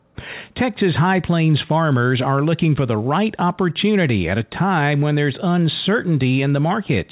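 No technical faults can be heard anywhere in this speech.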